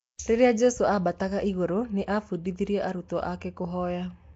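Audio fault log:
throughout Nellymoser compression: likely a Nellymoser Asao encode filling starved bands with noise, leaving speech rough, hissy and underwater.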